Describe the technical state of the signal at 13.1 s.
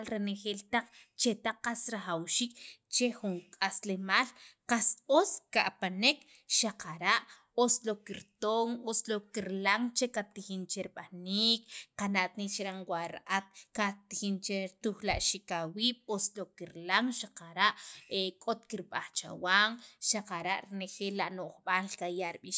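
At 13.1 s the speech signal is intact, with no dropout, clipping, distortion or other fault audible at that point.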